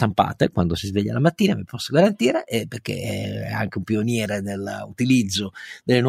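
No technical faults can be heard anywhere in the recording, and the speech signal stays continuous and stable throughout.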